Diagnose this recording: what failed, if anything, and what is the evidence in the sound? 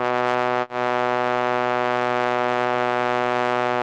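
At 0.61 s the music stops moving forward: the last sound is held and smeared for about 60 ms, sagging in level, and at 0.70 s it jumps ahead with roughly 60 ms of the passage simply gone. This is a burst of packet loss at the network stage. Consecutive packets never arrived in time, so the receiver's concealment stretched the final good audio to fill the gap before playback resumed on the next packets, through a call codec whose top end stops near 12 kHz.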